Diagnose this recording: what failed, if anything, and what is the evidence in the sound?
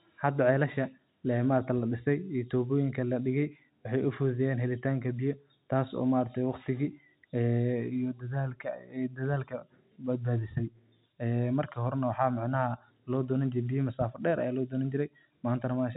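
Nothing in this recording failed.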